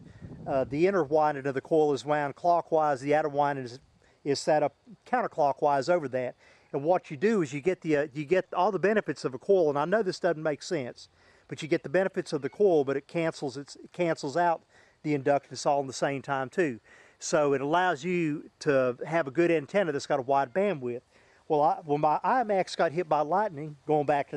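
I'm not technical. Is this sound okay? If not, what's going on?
Yes, I listened carefully and nothing in this recording stood out as a problem.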